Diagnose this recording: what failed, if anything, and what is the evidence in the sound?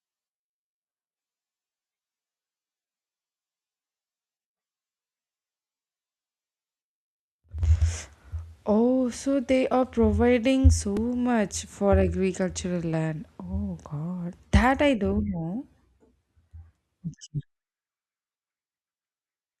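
A repeated buffer fault at the driver or buffer stage. At 10.97 s, just after "they are providing so", a tiny slice of speech plays three times with hard joins, heard as a brief click-buzz. Each repeat lasts about 2.7 ms, which fits a 128-sample buffer. Fresh audio arrived late, so the device replayed stale data.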